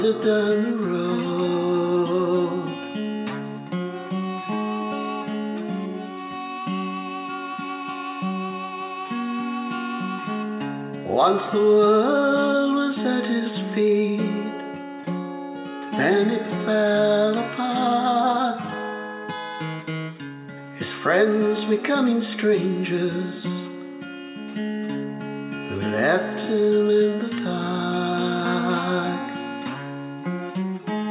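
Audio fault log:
Nothing stood out on listening, apart from the narrow, telephone-like band of the call path, which carries nothing above 4 kHz.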